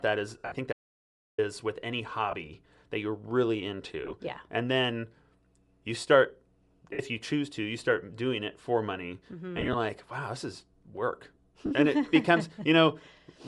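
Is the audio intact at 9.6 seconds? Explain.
No. Lost LE Audio frames hit between 9.58 and 9.75 s: about 60 ms of audio goes missing in short gaps spread over 160 ms, which fits six 10 ms frames. The decoder covers each gap by replaying the previous spectrum with scrambled phase, so the speech briefly turns into a grainy, noisy smear. Bluetooth LC3 compression is also audible at this moment and throughout. The upper spectrum sounds thinned and partly replaced by noise, giving a breathy, gritty edge that likely comes from LC3 coding at around 48 kbps.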